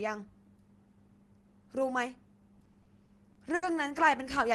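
From 2.59 to 3.65 s the speech stalls seven times. This is repeated stalls (stutter). Packets arrived late, so the jitter buffer kept running dry. The receiver stretched the last sound to fill about 190 ms, up to 70 ms at once. Nothing is lost, but the speech drags and stutters.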